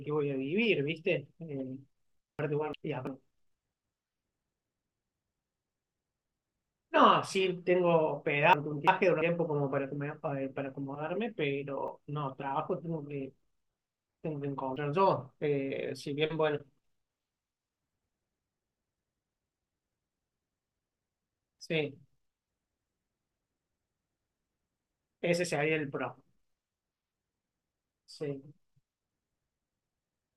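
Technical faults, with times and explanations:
2.39–3.07 s, 8.53–9.22 s and 18.69–19.38 s: chunks out of order. Each moment sounds briefly jumbled. Two adjacent 341 ms stretches of audio are swapped, so the later one plays first, and nothing is missing.
11.88 s and 14.76 s: dropped buffer (overrun). There is a small forward skip in the sound, and about 40 ms is missing with no gap of silence. The likely cause is a buffer overwritten before it was read, with the two sides then joined directly.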